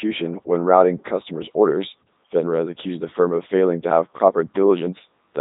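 From start to finish the speech passes through a Codec 2 vocoder at 3.2 kbit/s, rebuilt from sine waves, sounding robotic and buzzy, with harmonic-only spectrogram bands and nothing above 3.8 kHz.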